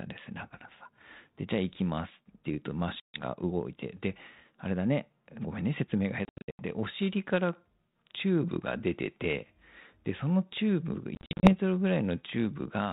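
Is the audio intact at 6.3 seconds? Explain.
No. Packet loss on an ADPCM call strikes from 6.25 to 6.62 s: roughly 280 ms of audio goes missing, broken into gaps spread over 340 ms, the longest lasting 80 ms, which fits a loss of around thirty packets. Each gap is filled with abrupt silence. Because the 32 kbit/s G.726 decoder's adaptive predictor and step size drift away from the sender's, speech resumes after each hole with some distortion, before settling within tens of milliseconds.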